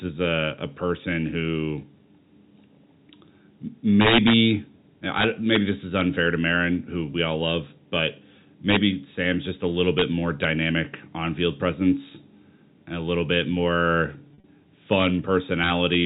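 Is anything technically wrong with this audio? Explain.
Yes, two problems. First, integer overflow at 4.01–4.33, 5.19–5.56, 5.99–6.01, 8.70–8.77 (after "we all love but"), 9.99–10.02 (after "just a little"), 10.44, 14.93–15.07 and 15.64–15.94 s. Peaks pushed up to about 6 dB past full scale wrap to the opposite sign instead of limiting, so you hear vicious cracks, much harsher than clipping.

Second, packet loss with pitch repetition at 14.28–14.44 s, right after "a little bit more". About 100 ms is missing, scattered over 160 ms, with the longest gap 40 ms. The receiver fills each hole by repeating the last pitch period, giving a brief held, buzzy smear, all within the 4 kHz telephone band.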